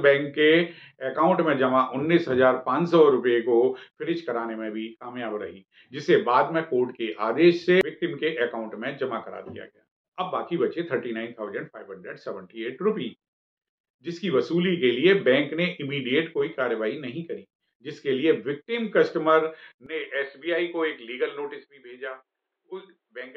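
At 19.86 s the audio abruptly turns dull and about 10 dB quieter, with nothing above 4.4 kHz and a faint new noise floor. No gap marks the change. This is likely an input switched to a poorer device.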